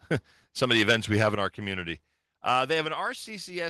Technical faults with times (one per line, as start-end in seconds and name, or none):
0.63-1.28 microphone overload
1.35 microphone volume stepped down
2.85 microphone volume stepped down